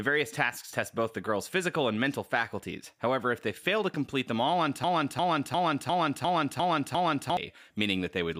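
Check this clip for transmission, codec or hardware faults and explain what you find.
One fault is present, a broken-record loop. From 4.84 to 7.37 s, just after "complete them all on", a 0.35 s fragment repeats exactly seven times, likely from a stalled stream resending its last buffer, so the intended audio is lost.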